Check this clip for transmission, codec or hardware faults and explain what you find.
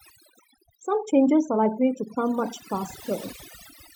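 Yes, there are three problems in this speech recording: one runs the whole way through, one starts almost immediately, and one is a single short event.

The overdone noise removal is present for the full length. The noise reducer was set far too hard. It pulled individual frequency bands down or out entirely whenever they looked close to its idea of the noise, and it took the quieter parts of the voice with them. The result is a background that drops away and breaks up into little twinkling specks.

From about 0.12 s to the end there are clock slip clicks: a faint, steady ticking roughly every 30 ms, fast enough that it blurs toward a soft rattle. It's easiest to hear on the louder, sustained parts of the voice and disappears in the gaps. The likely cause is two devices free-running on separate clocks, off by something like 700 ppm. Each time that error adds up to a full sample, one sample gets dropped or doubled, which produces a tick.

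At 1.52 s, lasting about 44 ms, there's a compressed frames skipped event. The audio jumps forward by around 40 ms, which fits a single lost frame of about 43 ms. That frame was either missing from the stream or thrown out by the decoder as corrupt.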